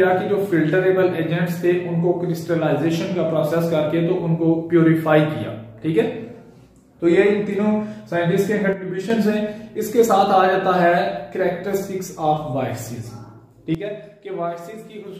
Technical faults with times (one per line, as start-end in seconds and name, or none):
8.73-9.10 sudden gain jump
13.75-15.19 sudden gain jump